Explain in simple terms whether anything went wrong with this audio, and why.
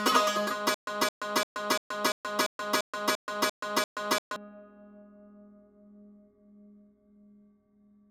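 Yes. From 0.74 to 4.36 s the music hits a stutter with silent gaps: a 216 ms snippet repeats ten times, each followed by 128 ms of dead silence, every 344 ms. The music meant for that stretch never plays, likely because the player stalled. Unlike a plain skip, the same fragment keeps coming back.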